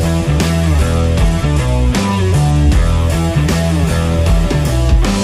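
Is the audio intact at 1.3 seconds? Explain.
No. At 1.3 seconds the audio sits inside a Bluetooth SBC bit pool drop that runs from 0.8 to 3.0 s. The link was congested, so the sender cut the bits per frame to keep the stream going. The highest sub-bands got almost nothing. The rest were quantised coarsely. The treble goes dull and a gritty noise rises. The sound fits a bit pool halved from about 28 to 14, near 108 kbps.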